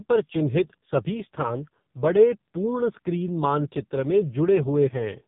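Throughout, the speech passed through the AMR narrowband mobile codec at a low rate, around 5.15 kbps, cutting everything above 3.7 kHz and leaving a heavily buzzy, synthetic voice.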